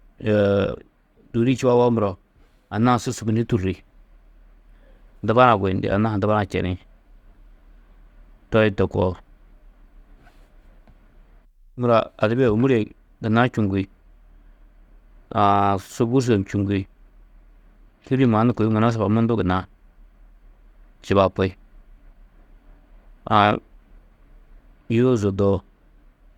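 From the start to 4.0 s the speech plays as an adaptive stream starting at a low bitrate: the player opens on a lean version, which sounds like roughly 32 kbit/s Opus, with dull treble and heavier codec smearing, then jumps cleanly, with no gap, to a fuller stream nearer 64 kbit/s.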